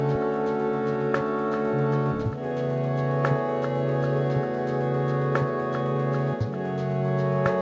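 No technical faults can be heard in this music, which has passed through call microphone processing that removes the lowest bass and leaves nothing above 8 kHz, both normal for that path.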